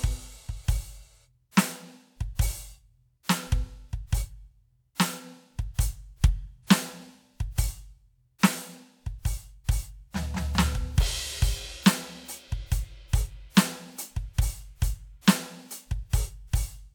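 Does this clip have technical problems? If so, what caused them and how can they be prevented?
No, this music has no technical problems to report.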